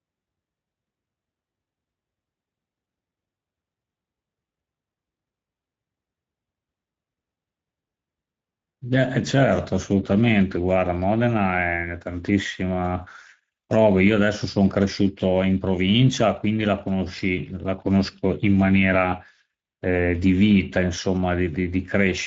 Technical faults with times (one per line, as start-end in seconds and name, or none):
0.00-22.27 Speex codec